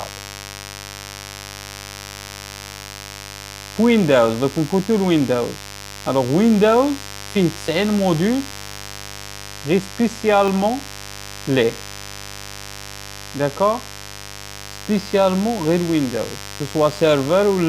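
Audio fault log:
throughout: mains buzz. A steady, raspy buzz sits about 15 dB below the sound, built from a 50 Hz fundamental and a dense stack of harmonics reaching several kilohertz. Sharp switching spikes twice per mains cycle make it rasp rather than hum smoothly.
2.29 s and 10.48 s: dropped buffer (overrun). Each is a sudden jump forward in the sound, with no gap of silence, which sets it apart from a dropout. It is likely a missed buffer, losing roughly 10 ms and then 20 ms.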